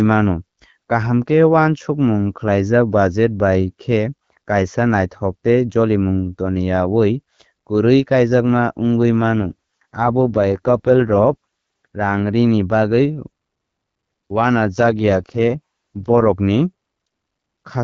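An AMR rate drop runs from 9.37 to 11.86 s, between "kaijakma wngwi" and "rangrini bagwi", and again from 14.64 to 16.30 s. Both times the speech turns rougher and more synthetic, a raspy texture that fits the AMR wideband codec being pushed from 12.65 down to 6.6 kbit/s, spending the freed bits on protecting against a weak radio link. The bandwidth stays the same and nothing drops out. The clearer sound returns once the rate climbs back.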